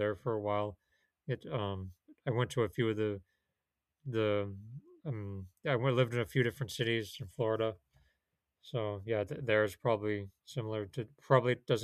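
Nothing stood out on listening to this speech recording.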